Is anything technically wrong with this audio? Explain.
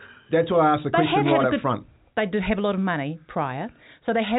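No, nothing in this speech clip points to a technical fault. It has the narrow sound of G.711 telephone coding, with nothing above about 3.8 kHz.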